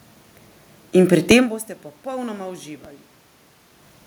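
At 1.31 s and again at 2.85 s, the waveform's zero line jumps in a DC step and then decays away through a high-pass near 20 Hz. Each jump lands as a brief low thump, while the speech carries on unchanged, including the level change around 1.5 s as the talker shifts.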